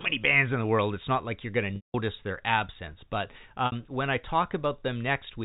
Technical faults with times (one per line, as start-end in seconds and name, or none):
1.76-1.94 packet loss with pitch repetition
3.66-3.72 packet loss with pitch repetition